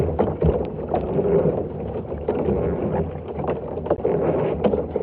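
At about 3.96 s there's a short hole running to 3.99 s, most likely a Bluetooth dropout. It sounds like one packet, roughly 15 ms of audio, never reached the headphones in time. The sound cuts out and resumes further along, as if it kept playing.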